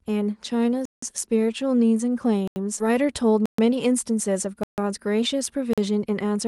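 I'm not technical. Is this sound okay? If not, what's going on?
No, there are three kinds of problem in this speech clip.

The first is a block of digital silence, which happens five times: at 0.85 to 1.02 s, 2.48 to 2.56 s, 3.46 to 3.58 s, 4.63 to 4.78 s and 5.73 to 5.78 s. Each time the sound suddenly drops to complete nothing for between about 40 and 170 milliseconds, then snaps back. This usually means the playback software didn't hand over the next chunk of audio in time.

The second is a skip ahead at 2.79 s. There's no silent hole here. Instead, about a second of speech simply goes missing, and what comes before and after is joined almost directly. That seamless jump is what sets it apart from the silences: a skip removes material, while a silence leaves a gap.

The third is a jitter buffer speed-up, from 2.89 s to the end. The call software had built up too much waiting audio and trimmed tiny slivers to catch up, so the speech runs about 8% fast. 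The pitch stays the same, so the voice sounds hurried rather than squeaky, unlike a tape simply played faster.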